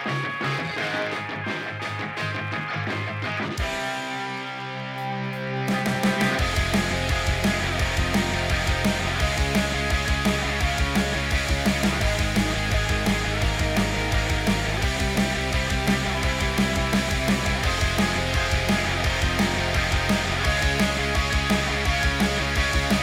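The audio carries a block size mismatch (truncated) throughout. Block ends are discarded, leaving a steady buzz near 91.9 Hz at the block rate. Playback speed stays at about 1.0x.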